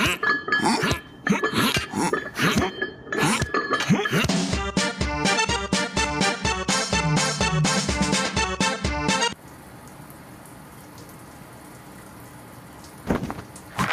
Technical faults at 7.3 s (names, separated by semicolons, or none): gain pumping